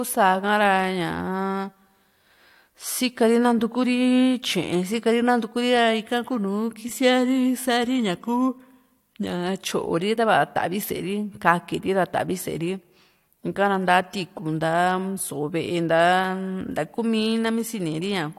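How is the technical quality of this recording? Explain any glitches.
No glitches or technical faults.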